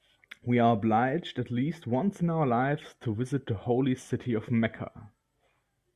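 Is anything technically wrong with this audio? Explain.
No, nothing is technically wrong.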